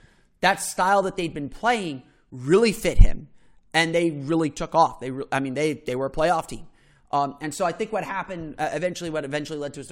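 No technical faults turn up at any point in the recording. There is nothing to flag anywhere along its timeline.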